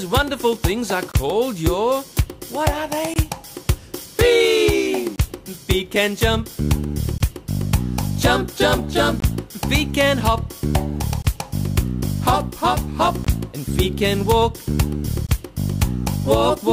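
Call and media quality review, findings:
Gap between chunks: short hard-edged holes, about 21 ms each, at 1.12, 3.14, 5.16, 7.18, 9.20, 11.22, 13.25 and 15.27 s. Steady rhythm, a hole every 2 s of audio. Nothing missing, just paused at each join. Probable component: chunked delivery or playback, codec padding or a player starting each chunk late. The hole length fits a 1024-sample frame at 48 kHz, so check the chunk boundaries.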